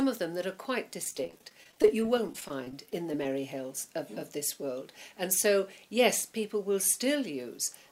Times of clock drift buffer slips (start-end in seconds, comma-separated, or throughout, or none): none